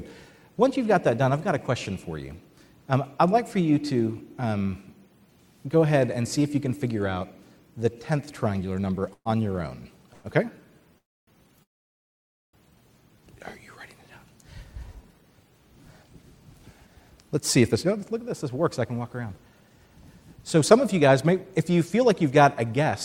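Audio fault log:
9.13 to 9.27 s, 10.13 to 10.26 s, 10.98 to 11.29 s, 11.63 to 12.55 s, call audio freeze: the last sound is drawn out as a fading buzz, then silence for the longer ones (about 0.3 s and 0.9 s). The audio resumes where it stopped, likely because the jitter buffer ran empty. On a spectrogram these show as smeared tonal bands, followed by blank gaps in the longer ones.
16.03 to 18.82 s and 20.72 to 22.92 s, jitter buffer speed-up: the audio runs 5 to 6 percent fast at unchanged pitch, as tiny pitch-period slices are cut to shed roughly 150 ms of backlog in each. On a spectrogram the events look compressed in time while the harmonic spacing stays the same.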